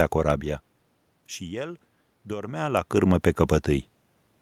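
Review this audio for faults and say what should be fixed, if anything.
Nothing to fix: the background noise is the room itself, and the level changes near half a second and again around two and a half seconds are the talker moving relative to the microphone, not anything in the system.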